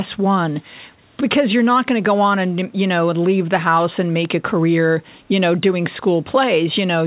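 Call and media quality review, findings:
Echo leak, 0.61–0.65 s: residual pickup likely passed by the far-end echo canceller and returned; a very faint scrap of speech repeats about 341 ms late.

Bit error spike, 4.25 s: a flipped bit in the digital path corrupts a sample or two, and the value jumps and snaps back, giving one sharp broadband tick unrelated to the speech.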